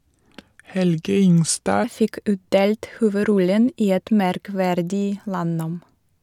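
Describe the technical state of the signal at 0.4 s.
At 0.4 s the speech is inside a section at the wrong speed, running from the start of the clip to 1.84 s. Playback there runs at 0.815 times the original rate, so timing stretches and pitch drops together, by about four semitones. The voice sounds deeper and slower than the rest of the clip. The likely cause is that this segment was resampled or played against a mismatched clock, which shifts duration and pitch as one.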